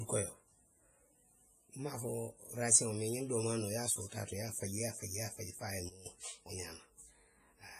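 Right from the start the whole clip has the ringing, washy sound of heavy WMA compression, likely WMA version 1 at a rate that fits around 24 kbps. Its long transform blocks smear quantisation noise over tens of milliseconds, the hiss breathes along with the speech, and nothing survives above 15.3 kHz.

Then at 5.89 s, just after "faji fo a ye", there's a sudden gain jump: the level drops by about 15 dB in one step and stays down until 6.06 s, speech and background together. That's likely a gain setting applied instantly, with no ramp.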